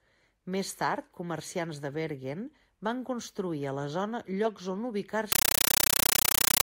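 A speech clip. From 5.32 s to the end, the sound turns into very loud, chattering static. This is a compressed stream played as audio. Undecoded AC-3 data is being treated as samples. Each frame gives a 9.33 ms noise burst, then silence, repeating 31.25 times a second. This fits a 448 kbps stream.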